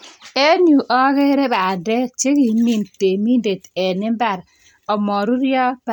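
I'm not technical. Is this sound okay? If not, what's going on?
Yes, no faults are audible anywhere in this speech recording.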